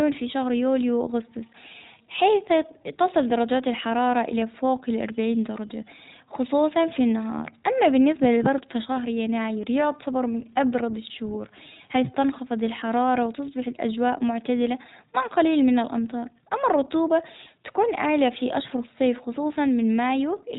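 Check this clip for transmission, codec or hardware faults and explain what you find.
The whole recording has passed through the iLBC codec, and its damage is plainly audible from start to finish. iLBC codes each short frame's excitation independently of the previous frame, and here it runs with 20 ms frames at around 15 kbps. It is also a narrowband codec, so nothing above 4 kHz survives. As a result, the speech sounds muffled and dull, with a grainy, slightly synthetic edge throughout.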